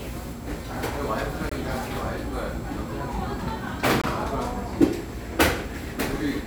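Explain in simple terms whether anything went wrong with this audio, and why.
Something did go wrong. The sound cuts out twice, from 1.49 to 1.52 s and again from 4.02 to 4.04 s. Each cut lasts about 21 milliseconds. This fault is called a gap between chunks. The audio was handled in pieces about 2.5 seconds long, and a moment of silence got stuck between them. Nothing is missing. The flow just stops briefly, so you hear tiny holes at a steady rhythm.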